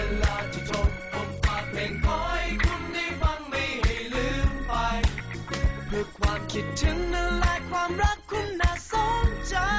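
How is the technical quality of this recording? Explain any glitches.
The technical quality of this recording holds up, with no glitches to explain.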